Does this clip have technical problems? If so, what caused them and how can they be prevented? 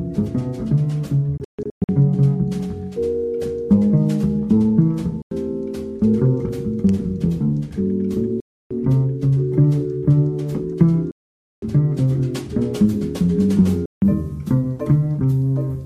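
Yes. The problem is a recurring Bluetooth dropout, most likely caused by audio packets failing to reach the headphones in time and being discarded, leaving the output silent until valid data arrived. The sound cuts out abruptly and resumes further along, as if it had continued unheard: from 1.37 to 1.89 s as several broken gaps with the longest about 0.14 s, then at 5.22 to 5.31 s, 8.40 to 8.71 s, 11.11 to 11.62 s, and 13.86 to 14.02 s. Keeping the source close to the headphones with a clear line of sight, and away from crowded 2.4 GHz Wi-Fi, should prevent it.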